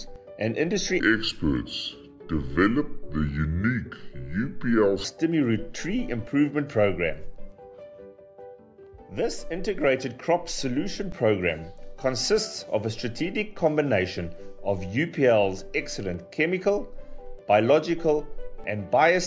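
Wrong sample rate from 1.0 to 5.04 s: the samples are clocked out more slowly than they were captured, with no conversion in between, so speed and pitch fall together. The passage runs at about 0.73 times its proper speed and sits roughly 5.5 semitones low, which fits material recorded at 22 kHz being played at 16 kHz. It sounds sluggish, dragged and dark until normal playback returns.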